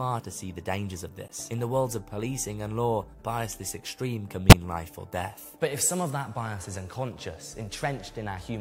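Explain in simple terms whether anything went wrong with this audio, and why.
Two short glitches come from a corrupt frame decoded: damaged compressed data the player played anyway, putting sound at wrong frequencies. At 1.28 s a faint blip lasts about 40 ms; at 4.50 s a much louder burst lasts about 40 ms. Each spans roughly two frames.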